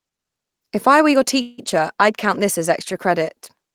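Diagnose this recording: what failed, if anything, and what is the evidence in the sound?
A network-stage call audio freeze at 1.41 to 1.60 s. Sound stretches into a fading buzz or hiss, then resumes intact. Delayed packets likely emptied the jitter buffer.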